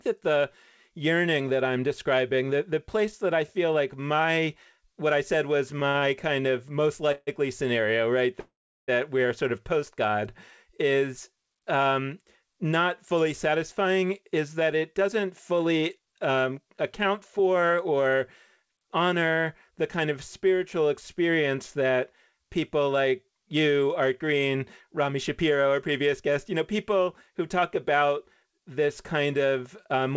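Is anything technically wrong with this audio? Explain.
Yes, the speech carries three kinds of transmission fault, all arising in a call path that is band-limited at 8 kHz.

Repeated stalls (stutter) run from 5.80 to 6.57 s, right after "what I said was". The jitter buffer ran dry four times in quick succession, and each time the receiver stretched the last sound for up to 50 ms, about 114 ms in all. The speech drags and catches, but nothing is lost. Unlike a freeze, the holds are brief and clustered.

A call audio freeze occurs at 7.12 to 7.30 s and again at 8.40 to 8.91 s. Packets were likely held up in transit, and the receiver filled the wait by extending the last sound. The first freeze is a 148 ms hold ending in a brief silence. The second lasts 480 ms and fades into roughly 380 ms of silence before the speech resumes where it stopped. A freeze is a single sustained hold, where a stutter is a string of short ones.

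Jitter buffer speed-up comes in three stretches:
13.14 to 19.72 s, after "is um not" and ending just before "the kind of spiritual", about 7% fast with around half a second removed.
24.04 to 26.21 s, 5% fast, about 150 ms removed.
27.62 to 28.65 s, after "you know people who", 7% fast, with well under a tenth of a second removed.

In each stretch the receiver trimmed tiny pitch-period slices to reduce its backlog. The speech sounds hurried while the pitch stays the same, and that unchanged pitch is what separates this from a resampling or playback-rate error.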